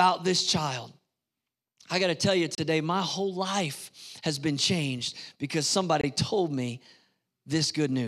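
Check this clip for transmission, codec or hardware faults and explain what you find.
The speech has two gaps at a join of encoded pieces. At 2.55 s, after "got to tell you", about 30 ms of silence opens, then "my whole life has" continues. At 6.01 s, after "has been changed because", a 24 ms silence precedes "told me". Separately encoded pieces were joined untrimmed, leaving encoder delay and padding. Each gap is an abrupt dropout with smeared edges.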